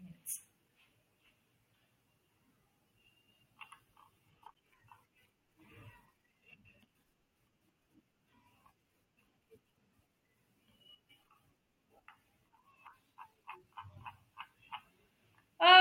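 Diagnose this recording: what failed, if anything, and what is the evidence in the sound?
A block of digital silence at 4.54 s, lasting 10 ms, interrupts the speech. The sound drops straight out and returns with no fade, and at this length the result is heard as a tick or dip rather than a noticeable hole. The failure sits at the driver or buffer stage: one output buffer was apparently not filled in time and went out as silence.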